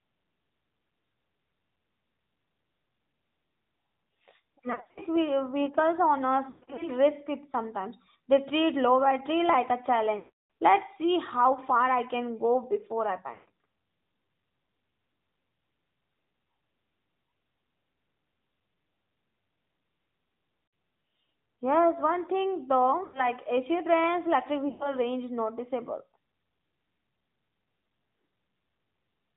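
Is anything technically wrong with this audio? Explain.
Yes. The speech has two problems: codec coloration throughout, and seven short dropouts.

AMR narrowband mobile codec, whole clip: the voice is squeezed through an 8 kHz pulse-driven vocal-tract model, so it sounds plainly buzzy and synthetic, which fits a mid-rate mode near 10.2 kbps. A spectrogram shows a hard ceiling with nothing above 4 kHz.

Lost AMR speech frames at 4.72–5.02 s; 6.50–6.90 s, between "vehicles owners" and "risk it sometimes"; 10.18–10.46 s; 13.34–13.50 s, after "can go before I"; 20.66–20.72 s; 23.04–23.30 s, after "one thing"; and 24.70–24.97 s. In these stretches the decoder repeats the last good pitch and spectrum at falling gain. The sound smears and warbles, and in the longer runs it fades out. A waveform shows the level sagging, and a spectrogram shows frozen harmonic bands.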